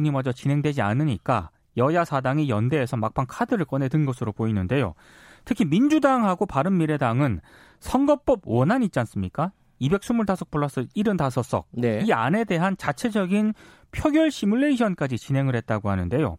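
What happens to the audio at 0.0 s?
Nothing goes wrong at 0.0 s; the audio is intact at that moment.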